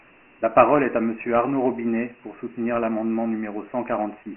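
Thin, gritty speech with a hiss trailing every syllable and nothing above 3.1 kHz throughout: Dialogic VOX ADPCM, heavy 4-bit coding that points to a 6,000-samples-a-second telephone file.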